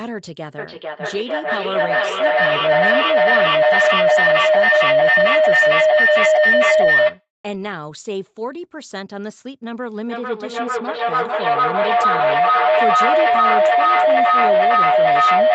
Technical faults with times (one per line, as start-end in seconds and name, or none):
0.58-7.28 feedback howl
10.05-15.54 feedback echo between two devices